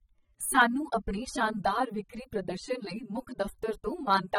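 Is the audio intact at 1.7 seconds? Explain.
No. Likely AAC compression at a low bitrate, around 24 kbps, runs throughout, with nothing above 16.2 kHz, leaving the speech at 1.7 s dull and smeared.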